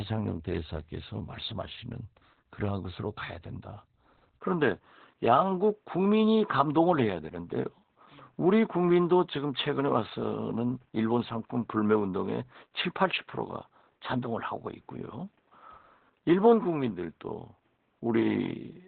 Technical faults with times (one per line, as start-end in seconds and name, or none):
0.00-18.87 Opus voice compression
4.39-18.87 input switched to a poorer device